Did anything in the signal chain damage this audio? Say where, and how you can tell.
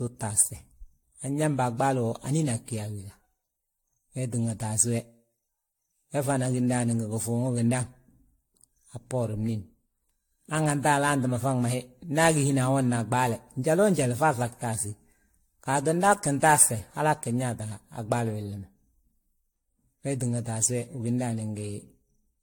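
Yes, at the codec stage, and the damage runs through the whole clip. The speech sounds swirly and hollow, with smeared, blurred attacks on consonants, and nothing is present above 19.1 kHz. That is more degradation than a single encode at this quality would leave. The likely cause is generation loss: the audio seems to have been encoded with AAC-LC around ten times, which fits something like 96 kbit/s. Each pass quantised afresh on a shifted frame grid, so noise and spectral holes built up.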